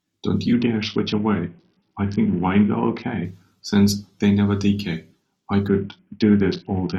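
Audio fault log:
0.53–3.25 s and 5.68–6.99 s: Bluetooth SBC bit pool drop. The treble dulls and gritty noise rises under the speech. A congested link forced a smaller bit budget, consistent with bit pool 31 falling to 6, near 55 kbps. Top sub-bands starve, and the rest quantise coarsely.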